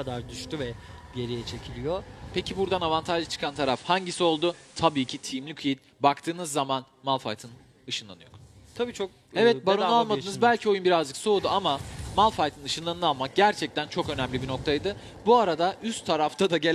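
A hybrid radio receiver drops its digital stream here and falls back to FM. This is digital radio blending to analogue. From 3.24 s the sound cross-fades over about 0.47 s to the analogue broadcast. Hiss rises to roughly 30 dB below the signal. The level shifts by about 2 dB. At 5.53 s the receiver blends back to digital, removing the hiss.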